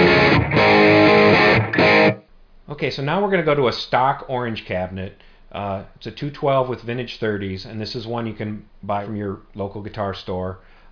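There are no technical faults to describe in this audio.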